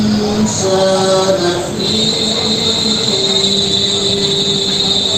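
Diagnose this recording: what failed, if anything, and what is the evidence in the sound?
Nothing in the recording points to a failure at any stage of the chain. No event stands out in the sound as evidence of a fault.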